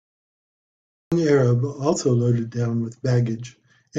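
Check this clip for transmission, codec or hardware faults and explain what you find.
One fault stands out: a cut-off start.

From 0 to 1.12 s the clip holds digital silence. At 1.12 s the speech bursts in abruptly, already partway through a sound. There is no natural onset and no fade-in. The capture or stream began late, so the front of the utterance was never recorded. What remains starts mid-waveform. The ear hears a hard, truncated entry rather than speech building from quiet.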